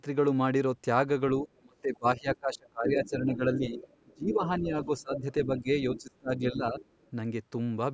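From 1.44 to 6.78 s the speech repeatedly dips and thins, about three seconds in all, dropping by roughly 25 dB at its deepest. This is speech suppressed in double talk, likely from the echo canceller turning down both sides while both spoke. Within and just after that stretch a fainter second voice leaks through at 2.35 to 3.09 s, 3.56 to 4.48 s, 4.83 to 5.2 s, 5.96 to 6.01 s and 6.8 to 7.1 s, from roughly 10 to 25 dB below the speech. This is the other side's voice leaking through, likely loudspeaker echo the canceller failed to remove. The band stops at 8 kHz, and the call's microphone processing trims only the lowest bass.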